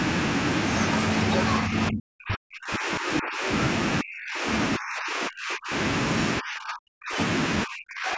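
The speech drops out in five stretches, at 1.67–3.49 s, 4.02–4.47 s, 4.78–5.74 s, 6.40–7.19 s and 7.64 s to the end, each cut by roughly 40 dB except the third, cut by roughly 35 dB. This is likely speech suppressed in double talk, where the echo canceller mistakes the talker for loudspeaker echo and mutes both.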